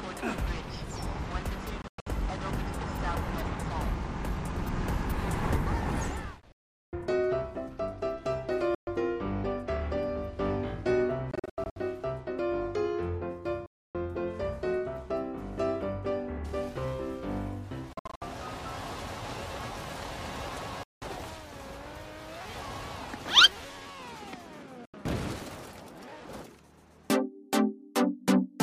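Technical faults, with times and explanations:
1.82–2.07 s, 6.52–6.93 s, 8.75–8.87 s, 11.31–11.76 s, 13.66–13.95 s, 17.93–18.22 s, 20.83–21.02 s and 24.85–24.94 s: Bluetooth dropouts. The sound cuts out abruptly and then returns further along, as if it had played on unheard. Gaps run from about 80 ms to 410 ms. At 1.82 s, 11.31 s and 17.93 s the silence breaks into several short holes, the longest about 60 to 100 ms. The likely cause is late wireless packets being discarded.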